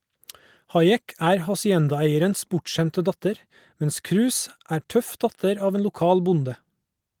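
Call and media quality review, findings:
No faults found in the speech signal; the Opus voice compression runs in fullband hybrid mode, with audible content reaching up to about 20 kHz and only light coding texture.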